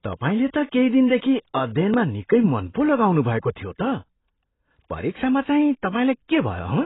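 Throughout the speech, nothing reaches above about 3.9 kHz, so sibilants sound dull and smeared, with a fizzy, warbling texture on sustained sounds. This is likely heavy AAC compression, AAC-LC, whose lowered cut-off points to a bitrate near 16 kbps.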